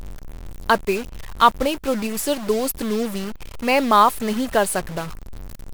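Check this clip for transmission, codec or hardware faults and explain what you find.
A stuck bit affects the whole clip. The speech carries a harsh, buzzy distortion, and the pauses fill with steady noise instead of falling silent. One data bit is likely held at a fixed value, so about half the samples land off by a step of about -30 dBFS. On a waveform the gaps show a fuzzy band rather than a flat line. A spectrogram shows broadband energy smeared through the silences and under the speech.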